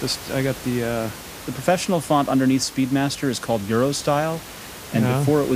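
No technical faults occur anywhere in the speech; the room noise, about 16 dB below the voice, belongs to the recording itself.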